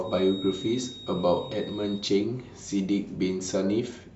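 It's a short bit of speech, and from the start to about 2.09 s there's a feedback whistle, a thin steady tone near 3.8 kHz sitting roughly 15 dB under the voice and swelling and fading slowly. The likely cause is a speaker-to-mic loop hovering right at the edge of feedback without taking off.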